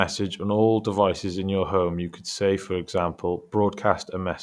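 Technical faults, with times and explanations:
No technical fault can be heard in the speech, and the signal stays steady and continuous throughout.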